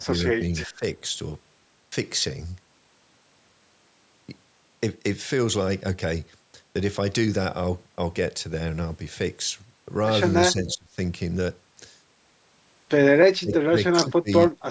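At the very start, from 0.00 to 0.13 s, the speech level dips by around 20 dB. This is speech suppressed in double talk, likely because both sides of the call spoke at once and the echo canceller, unable to separate the near talker from loudspeaker echo, turned everything down. The same dip returns from 0.67 to 0.83 s (about 15 dB), from 10.53 to 10.97 s and 13.41 to 13.76 s (about 25 dB each), and from 13.94 to 14.29 s (about 20 dB). On a waveform each appears as a sudden pinch in the envelope. On a spectrogram the harmonics fade or break into gaps for a fraction of a second.

Between 0.59 and 0.67 s, and again from 10.69 to 10.75 s, a faint copy of the voice comes back about 0.32 s late, roughly 25 dB below the speech. This is an echo leak, likely from a loudspeaker on one side of the call whose canceller let part of the microphone pickup through. It sounds like a brief ghost of the voice. 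On a spectrogram it shows as weak harmonic traces offset in time from the main speech, all within the call band that stops at 8 kHz.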